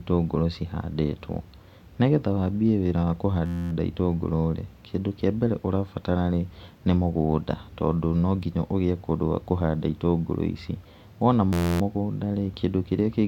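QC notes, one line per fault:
3.46–3.72 s, system hang loop: an 11.6 ms slice repeats about 22 times, giving a steady 86 Hz buzz. The stalled driver kept replaying one ring buffer, which fits a 512-sample buffer.
11.53–11.81 s, system hang loop: the same 11.6 ms loop repeats about 24 times as an 86 Hz buzz, again pointing to a 512-sample buffer cycling during a freeze.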